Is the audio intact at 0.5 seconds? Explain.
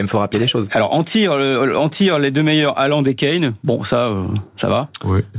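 No. Gain pumping runs through the whole clip, including 0.5 s. Excessive gain feeding a fast limiter is the likely cause, pulling the gain down roughly 15 dB under loud speech.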